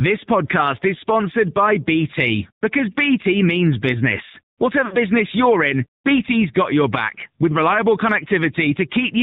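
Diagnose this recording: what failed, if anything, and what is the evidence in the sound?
Codec stage: the AMR narrowband mobile codec holds the whole clip below 4 kHz, and the speech is plainly buzzy and synthetic, which fits a low 7.4 kbps mode.

Network stage: lost AMR speech frames from 4.86 to 4.97 s, between "means business" and "you're in". The decoder stretches the last sound and fades it, which fits about 60 ms of missing frames.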